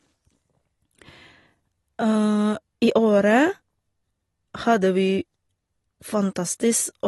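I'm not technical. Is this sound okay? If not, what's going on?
No. Throughout the speech, the sound is dull and smeared, with nothing above 11.8 kHz and a watery, warbling fizz on hissy consonants and held sounds. The likely cause is AAC compression: the file was squeezed hard to save space, so the encoder threw away the highest sounds and coarsely rebuilt the rest. A muffled microphone or simple treble cut would sound dull but clean. The swirling, fizzy texture is what points to heavy compression.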